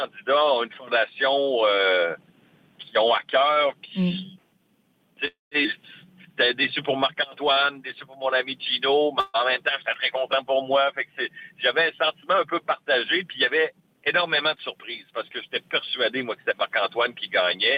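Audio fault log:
5.27–5.53 s, call audio freeze: the sound stops and a fading continuation fills about 240 ms, falling silent for about 170 ms of it. Packets were likely held up and the jitter buffer ran dry. Playback then resumes where it stopped, so nothing is lost, only delayed.
9.20–9.36 s, call audio freeze: a shorter hold of 138 ms, filled by the last sound carried on with no silent stretch. Again late packets likely emptied the buffer. The audio picks up exactly where it left off.
5.63 s, skip ahead: playback jumps forward with only an 11 ms join. Roughly 150 ms of audio is gone. Later audio was already waiting when a stretch was dropped, on the way or by an overflowing jitter buffer, so both sides are joined almost directly.
7.44–8.39 s, jitter buffer slow-down: the sound runs at 92% speed without any change in pitch. The buffer was building a reserve by repeating single pitch periods and bits of pauses. 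This adds 86 ms, drawing sounds out.
9.94 s, repeated buffer: a very brief click or buzz. New audio was late, so the device played its last buffer once more. The buffer lasted 2.67 ms, which fits a 128-sample buffer, and the hard joins make the click.
13.58–15.31 s, jitter buffer speed-up: the sound runs at 107% speed, pitch unchanged, and feels hurried. Too much audio had piled up in the buffer. The receiver cut short pieces of a pitch period or so, removing roughly 100 ms in total.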